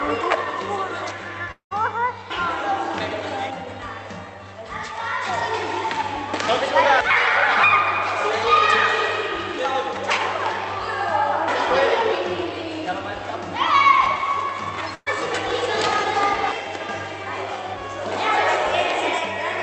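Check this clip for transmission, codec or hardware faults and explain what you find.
Two transmission faults are audible. The call path comes through as band-limited coded audio with nothing above about 8 kHz.

From 1.51 to 1.73 s the sound smears into a fading buzz or hiss, then drops to silence before resuming. This is likely a long network dropout that lost about 200 ms of audio.

From 14.95 to 15.08 s a brief held, fading buzz or hiss replaces the audio. A burst of packet loss removed about 120 ms, and the receiver's concealment filled the gap.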